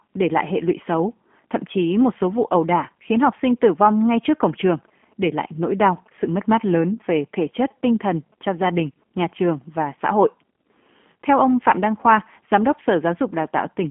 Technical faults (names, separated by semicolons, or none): G.729 codec